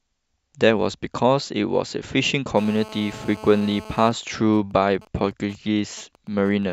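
From 2.57 to 4.08 s, a GSM phone buzz: rectified 217 Hz bursts from a 2G phone in a call rasp steadily about 18 dB below the speech, harsher than mains hum. From 4.08 to 6.64 s come GSM signalling bursts: with its user silent, the phone sends only sparse groups, faint even ticks with a longer buzz twice a second instead of a continuous buzz.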